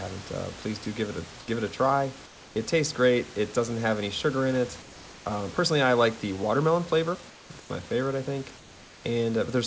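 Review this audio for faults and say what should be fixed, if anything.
At 0.84 s, about 20 ms of speech is briefly replaced by steady noise, likely sound dropped by the voice detector treating a quiet moment as background. Prevent this by adding hangover time or lowering the detector's threshold.

Comfort noise likely replaces the background at 1.40–1.48 s (between "give it a" and "give it a try"), 2.26–2.56 s (before "tastes great"), 4.82–5.26 s (after "any sugar in it"), 7.30–7.50, 7.60–7.70 and 8.58–9.04 s. During these pauses, the room noise becomes a flat synthetic hiss about 2 to 6 dB quieter. Prevent this by disabling discontinuous transmission or improving the comfort noise's level and spectral match.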